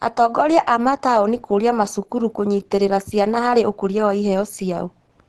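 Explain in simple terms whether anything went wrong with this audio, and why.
Something did go wrong, and it lasts the whole clip: the speech carries Opus compression damage that is plainly audible. The voice sounds somewhat muffled and hoarse, and nothing comes through above about 12 kHz. The likely cause is an Opus encoder squeezed hard enough to switch into its mixed speech mode. Unlike MP3 damage, it has less swirling or watery sound, and unlike a simple treble cut, the hoarseness sits inside the voice itself.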